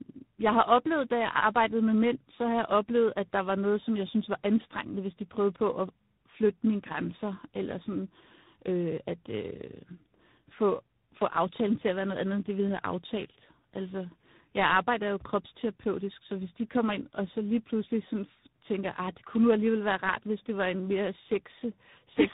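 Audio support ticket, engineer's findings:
Tandem speech coding, whole clip. Rough, noisy, muffled and warbly, nothing above 3.8 kHz. The warble points to a model-based AMR-NB leg around 7.95 kbit/s, and the grit points to a G.726 ADPCM leg near 24 kbit/s, with a G.711 mu-law hop between them. Each border decodes and re-encodes, so every coder works on the previous one's damage and the artefacts stack.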